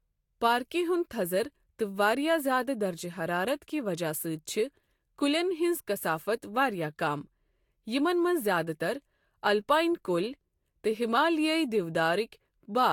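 Across the whole speech recording the sound is swirly and hollow, with smeared consonant attacks and a watery texture, all heavier than a single lossy encode at this quality would give. This is likely generation loss: repeated decoding and re-encoding, here about three passes of a Vorbis-like codec at a rate pointing to around 70 kbit/s. Each pass quantised on a fresh frame grid, so noise and spectral holes accumulated. Nothing remains above 19.1 kHz.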